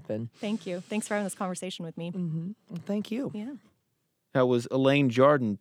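No dropouts, clicks, distortion or timing faults can be heard anywhere in this speech recording.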